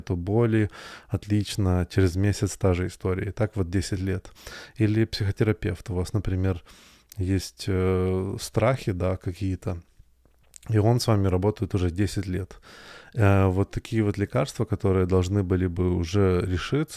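Nothing technical goes wrong anywhere in this bit of speech, so there's no fault to point to at any moment.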